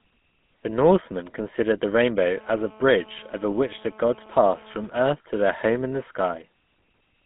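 GSM full-rate codec damage runs through the whole clip. The speech has passed through the original GSM coder, which fits a 13 kbps full-rate stream. It models the vocal tract and drives it with a sparse pulse train built from every third excitation sample. The band is squeezed to roughly 150 Hz to 3.5 kHz, so the speech sounds thin and muffled, with a plainly audible buzzy, gravelly roughness.

GSM phone buzz appears from 2.35 s to 4.87 s, starting just after "considered the" and clearing just before "earth to their home". A nearby 2G phone in a call is transmitting in bursts at about 217 per second. The audio circuitry rectifies those radio pulses into sound, giving a hard, raspy buzz at 217 Hz with dense harmonics. It holds steady throughout the stretch, about 26 dB below the speech, and is unrelated to what is being said.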